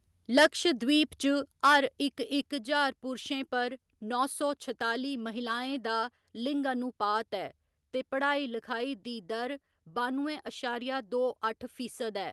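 At 2.46 s the whole speech signal, voice and background together, drops by about 4 dB in a single step and stays at the new level, just before "ज्हार पुरशें पर नौ". The likely cause is a microphone volume step-down, where the call software judged the input too hot and cut the device gain at once. The audio, carried over an Opus call path band-limited to about 12 kHz, simply sounds abruptly quieter from that point on.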